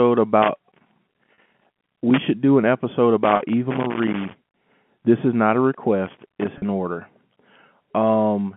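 Loose connector crackle runs from 0.42 to 2.19 s: a worn or dirty contact is making and breaking as it moves, chopping the signal into an irregular scratchy burst with pops wherever DC sits on the line. Inside it, at 1.34 to 1.38 s, comes packet loss with pitch repetition. About 40 ms of audio went missing, which fits two 20 ms packets, and the receiver filled the gap by repeating the last pitch period, so the sound briefly holds on a slightly buzzy, sustained tone. The same crackle returns from 3.24 to 4.66 s, starting after "should do an episode" and clearing before "this is not a". Within it, at 3.36 to 3.40 s, another 40 ms gap is bridged the same way, again as a short held buzz. A shorter crackle burst follows "this is not a" at 6.06 to 6.48 s, and a third 40 ms pitch-repetition patch lands at 6.58 to 6.62 s, all heard through the 150 Hz to 3.4 kHz telephone band of the G.711 link.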